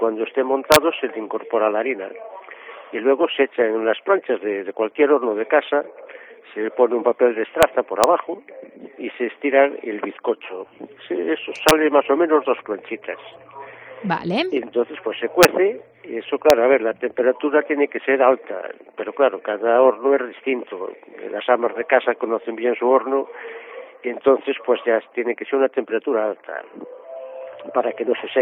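Integer overflow produces six sharp cracks at 0.72 to 0.76 s, 7.63 s, 8.04 s, 11.69 to 11.71 s, 15.43 s and 16.50 s. At each one a loud peak pushes the summed or amplified signal only slightly past the largest representable integer, by about 0 to 2 dB. Because there is no saturation, the sample wraps to the opposite extreme. The resulting full-scale jumps sound far harsher and more abrupt than ordinary clipping.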